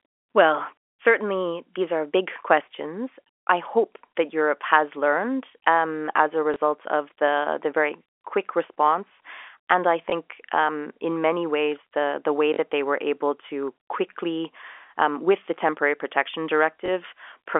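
At 6.54 to 6.56 s, 10.10 to 10.12 s before "um in many ways", 12.54 to 12.58 s between "the way" and "they were able to", and 16.86 to 16.88 s after "with the temporary protection", there is packet loss with the last packet repeated. The 20 ms gaps fit one lost packet each, and the 40 ms gap fits two. The receiver replays the previous packet, misaligned with the pitch. The longer 12.54 s gap adds a brief 50 Hz buzz, a robotic stutter over the narrow G.711 telephone band.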